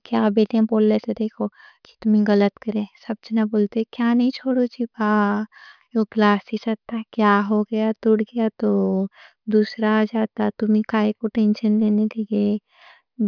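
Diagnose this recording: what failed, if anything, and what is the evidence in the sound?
Nothing failed; no stage leaves any audible evidence.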